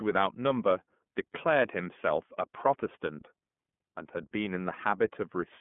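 Speech heard through the iLBC codec for its whole length, with plainly audible coding damage. The sound is confined to a telephone band of roughly 150 Hz to 3.4 kHz, with nothing above 3.6 kHz, so sibilants and consonant detail are dulled. Each frame's excitation is coded independently of the one before, which leaves a rough, slightly synthetic texture. That fits iLBC's 30 ms frame mode at about 13.3 kbps.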